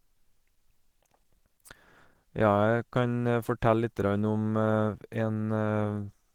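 From start to finish the speech has a muffled, hoarse, grainy quality that's plainly audible, and that's most likely Opus compression at a low bitrate, around 16 kbps. The encoder seems to be in its hybrid speech mode, though the band still reaches about 20.3 kHz.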